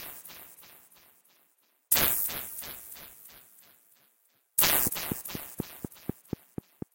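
From 4.87 to 6.83 s there's a train of clicks, about ten evenly spaced ticks at 4.1 per second, poking well above the sound, likely interference from nearby gear.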